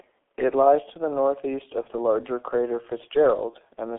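The whole clip runs through a G.723.1 codec, and it's heavily damaged. Nothing gets past roughly 300 Hz to 3.4 kHz, so the speech sounds muffled and boxy. The coder only refreshes its voice model every 30 ms, which smears the consonants and leaves a hoarse, rough edge on everything. The thinness fits a very low rate, around 6.3 kbit/s.

Then there are two VoIP packet losses concealed by the speech codec. The first comes at 1.82 to 1.88 s, just after "lies to the northeast" and before "the larger crater." The second is at 3.50 to 3.55 s. Each gap is about 30 ms, which fits one lost frame. The decoder fills it by stretching its last pitch and filter with falling gain, so you hear a short, fading smear instead of a clean dropout. The sound stays weak or distorted for a moment afterwards while the decoder recovers.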